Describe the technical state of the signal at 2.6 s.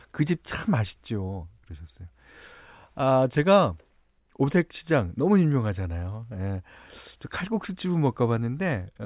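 At 2.6 s the signal is intact, with no dropout, distortion, glitch or other audible fault.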